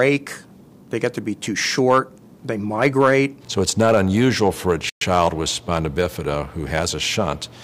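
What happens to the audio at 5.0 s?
A playback stall from 4.89 to 5.01 s: the sound drops to silence for 120 ms, then resumes, likely because the player ran out of data.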